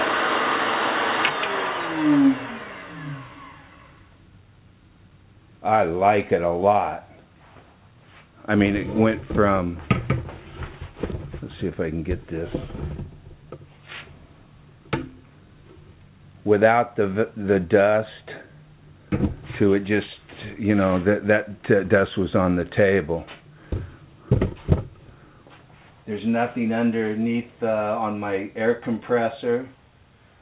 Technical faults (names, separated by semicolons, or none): none